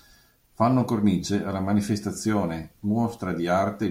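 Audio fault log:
No faults detected in the speech.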